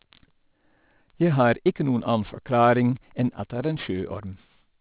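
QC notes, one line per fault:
Throughout, aliasing: the speech was brought down to a rate that suits 8 kHz sampling, and content above the new 4 kHz limit was never filtered off first, so it folds back below 4 kHz as false tones unrelated to the real ones. Sibilants come out gritty and metallic, with a harsh edge sitting roughly 30 dB under the signal. On a spectrogram, energy runs hard right up to 4 kHz with mirrored streaks descending from the band edge.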